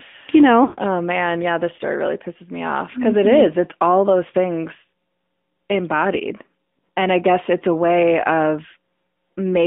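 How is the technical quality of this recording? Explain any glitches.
Technically it's pretty rough. The whole thing has gone through a phone codec, and there's one clear dropout near the start.

AMR narrowband mobile codec: For the full length, the speech sits in a phone-line band of about 200 Hz to 3.6 kHz, with nothing above 4 kHz. AMR-NB models the vocal tract and excites it with a few pulses per 5 ms subframe, so at this rate, which sounds like the 10.2 kbps mode, the damage is plainly audible. You get that buzzy, slightly synthetic edge on the voice.

Lost AMR speech frames: From 0.64 to 0.79 s, about 140 ms of audio is missing, which fits seven dropped 20 ms frames. Those frames failed their checksum after radio errors, so the decoder kept replaying the last good pitch and vocal tract settings at falling gain. You hear the sound smear out and sag toward silence. Then the speech comes back a bit weak and rough for a moment.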